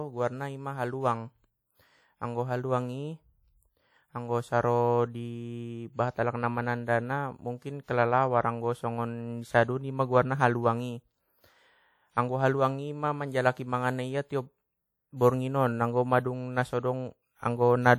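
It's a speech clip with plainly audible codec damage from start to finish: a ringing, washy smear around the voice and a hiss that breathes with it, likely WMA compression, consistent with a low bitrate of about 48 kbps, though the band still runs up to about 20.1 kHz.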